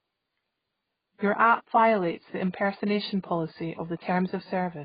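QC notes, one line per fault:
Throughout, AAC compression: speech sounds dull and smeared with a warbling, fizzy edge, nothing above 4.9 kHz, likely from heavy low-bitrate AAC-LC coding around 16 kbps.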